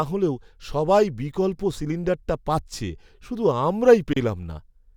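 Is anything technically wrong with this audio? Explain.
Yes. At 4.13 s there's a gap at a join of encoded pieces: separately encoded segments were butted together untrimmed, so encoder padding leaves a 32 ms gap in the speech.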